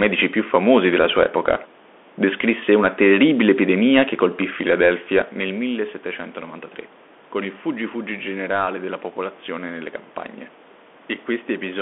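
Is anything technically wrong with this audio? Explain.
Yes. The speech has passed through a Bluetooth CVSD headset codec, and the damage is plainly audible for the whole clip. The band runs only from about 250 Hz to 3.5 kHz, so the sound is thin and boxy. CVSD sends one bit per sample, which fits a 64 kbps link, stepping up or down with an adaptive step size. Sibilants come out scratchy, loud bright passages distort where the step can't keep up, and a granular hiss sits underneath. The level change around 5 seconds is the talker moving.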